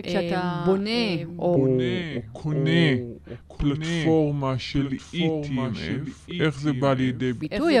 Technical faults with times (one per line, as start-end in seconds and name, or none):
0.00-7.80 doubled audio track
1.56-7.41 section at the wrong speed